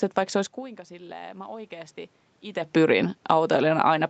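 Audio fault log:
0.56–2.01 s, automatic gain rising: the input level dropped by about 19 dB just after the talker moved away from the microphone near 0.5 s, and the automatic gain control responded by lifting its gain slowly, by about 3 dB over roughly a second and a half. Because the gain acts on everything the microphone picks up, the voice and the room noise behind it swell together, a gradual upward drift rather than a step, still well short of restoring the lost level.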